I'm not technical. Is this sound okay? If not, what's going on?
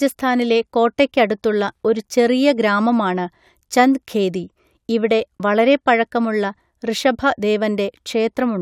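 Yes, this recording sounds fine, with nothing going wrong that you'd notice. The speech comes through steadily, with no breaks, jumps or odd noises anywhere along the way.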